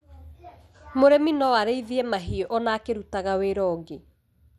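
From start to finish the speech is dull and gurgling, with a granular roughness, likely MP2 compression at a low rate such as 80 kbps. Starved sub-bands drop out, so a spectrogram shows upper frequencies cut away in flickering rectangular blocks.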